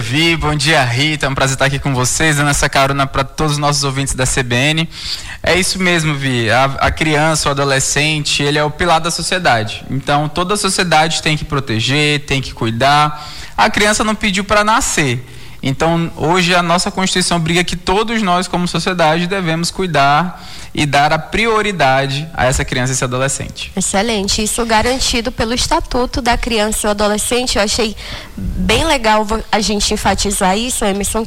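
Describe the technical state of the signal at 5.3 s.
At 5.31 s the audio skips ahead, a dropped buffer (overrun), likely from samples overwritten before collection, losing about 10 ms.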